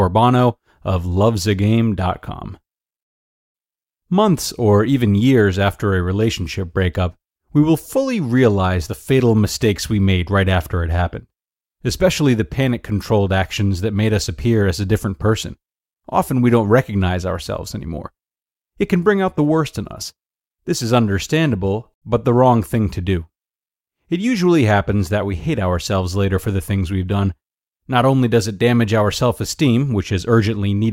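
No technical faults can be heard anywhere in the recording.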